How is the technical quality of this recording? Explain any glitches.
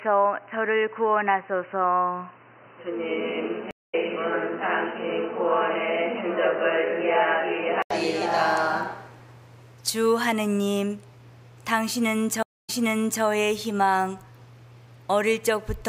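Quality is compromised: the opening half comes through a band-limited input, and two dropouts break the continuity.

From the start to 7.90 s, the input was likely switched to a poorer device. Nothing passes above 3 kHz, so the sound is dull and boxy, with a new noise floor about 35 dB down. At 7.90 s there is an 80 ms gap, and then the full band returns at a similar level.

Stream reconnect, 3.71 to 3.95 s: the connection dropped, and the player went silent for 222 ms before restarting its decoder. Playback resumes roughly 200 ms further on, so a small piece of the audio is skipped.

Stream reconnect, 12.43 to 13.23 s: the connection dropped again, leaving 255 ms of silence. The server then resent earlier data, so the audio resumes 0.55 s back and repeats that stretch.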